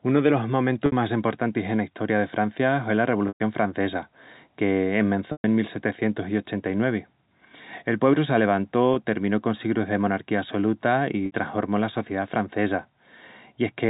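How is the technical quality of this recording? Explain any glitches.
The recording has five dropouts from packet loss with pitch repetition, heard through telephone-band G.711 coding.

At 0.86 s, after "unu delos" (60 ms); 3.28 s (120 ms); 5.32 s (120 ms); 8.94 s, before "terminó con sigrus de" (20 ms); and 11.26 s, before "la sociedá francesa" (60 ms), audio goes missing, in steps that fit 20 ms packets. The receiver fills each gap by looping the last pitch cycle and fading it, so shorter gaps sound like a brief buzzy hold and the 120 ms ones fade to silence before the speech cross-fades back in. On a waveform this appears as one identical cycle repeating with shrinking amplitude. On a spectrogram it shows as flat, unchanging harmonic stripes that thin out and then resume.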